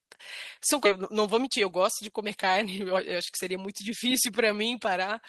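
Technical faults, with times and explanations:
0.85–0.87 s, skip ahead: playback jumps forward with no gap filled in, so about a second of speech is simply gone and the two sides butt straight together. That's what happens when a chunk gets dropped while later audio is already queued.
2.64–5.08 s, jitter buffer speed-up: the speech runs at about 107% speed but keeps its pitch, so it sounds a bit hurried. The buffer had built up too much delay, so it trimmed tiny pitch-period slices over and over, losing roughly 150 ms overall.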